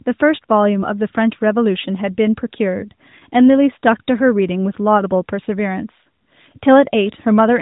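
No technical faults can be heard in this speech recording.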